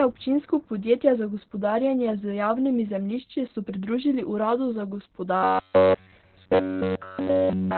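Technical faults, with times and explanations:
Throughout: Opus voice compression. The speech is coded at 8 kbps in narrowband SILK mode, so nothing survives above about 4.3 kHz and the excitation is coded coarsely. The result is muffled, hoarse and faintly robotic. Unlike a plain low-pass filter, the harshness comes from that coarse excitation coding, not just from the missing band.
5.37 to 7.77 s: robotic sound from repeated short buffers. Right after "so pridružili uradu za", the entire stretch becomes a rigid metallic buzz at 93.8 Hz, which fits a roughly 10.7 ms block being replayed while fresh audio is skipped, likely from starved playback buffers. Unlike codec roboticness, the buzz comes at a fixed rate set by the repeated block.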